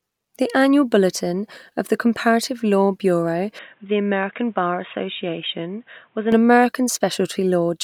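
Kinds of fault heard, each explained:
Input switched to a poorer device: The recording likely jumped from its original microphone to a lesser input, such as a headset's call profile, and then switched back. From 3.59 s to 6.32 s the speech loses everything above 3.8 kHz, so it turns dull and boxy. It also drops about 5 dB in level and gains new background noise roughly 40 dB below the speech. Both changes happen abruptly, with no gap at either switch.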